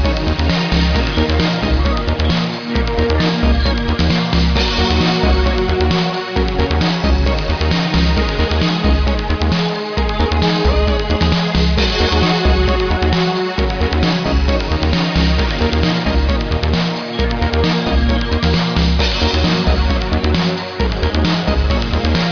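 Nothing technically wrong is audible anywhere in the audio.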